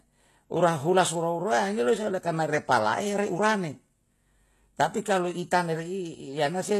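HE-AAC compression runs throughout, likely the cause of plainly audible damage to this speech. The treble sounds rebuilt from copied lower bands rather than coded, so s sounds turn gritty and lispy, nothing survives above 12.3 kHz, and the coarseness fits a bitrate near 16 kbps.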